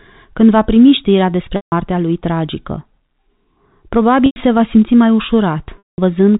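Three dropouts show packet loss with pitch repetition: 1.56 s after "când va primi știrea" (160 ms), 4.26 s just before "se va simți mai" (100 ms), and 5.78 s (200 ms). The receiver loops the last pitch period, giving a held, buzzy tone that fades out before the speech returns.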